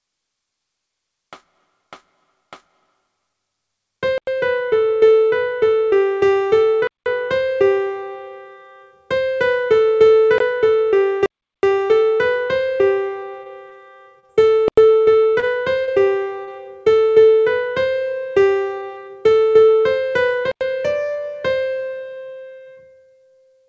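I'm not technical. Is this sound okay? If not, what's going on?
No. There are three kinds of problems.

Block of digital silence: the sound cuts out completely at 4.18, 6.87, 10.38, 11.26, 14.68 and 20.52 seconds. Three are brief holes of about a tenth of a second. The one at 6.87 lasts about 0.19 s, the one at 10.38 is a short hole of about 0.02 s, and the one at 11.26 is a gap of nearly 0.4 s. The program likely didn't deliver the next chunk of audio in time, so blank space was played instead.

Repeated packet loss (robotic sound): from 13.43 to 14.32 seconds the sound turns choppy, with small pieces missing. Bits of the call kept arriving late or not at all. Each time, the receiver patched the hole by stretching the last sound it had, which creates that artificial texture.

Short concealed packet loss: at 15.40, 15.84 and 16.44 seconds there are brief smears or wobbles, each only a few hundredths of a second long. 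A tiny piece of audio went missing each time and was covered over.

The audio also passed through a call connection, which cuts off the sound above 8 kHz.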